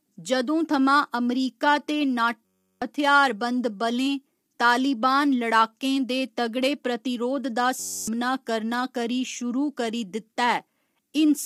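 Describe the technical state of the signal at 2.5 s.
At 2.5 s the audio is caught in a system hang loop. It runs from 2.45 to 2.82 s, just after "अमरीका ते". A 10.67 ms slice repeats 34 times. That fits a 512-sample buffer cycling while the system froze. It sounds like a steady buzz at 93.8 Hz. Around 0.4 s of real audio is lost.

Compression damage is also plainly audible here. The speech sounds rough and grainy, with noise between the harmonics and nothing above 18.3 kHz. The likely cause is low-delay AAC compression (AAC-ELD), at a low bitrate near 32 kbps.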